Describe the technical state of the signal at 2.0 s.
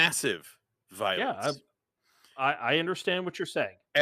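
At 2.0 s the signal is intact, with no audible fault at that moment.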